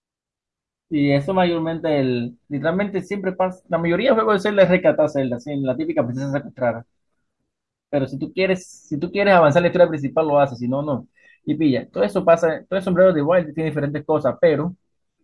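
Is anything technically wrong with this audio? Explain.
No, nothing technically wrong can be heard in this speech recording. No fault turns up anywhere in it.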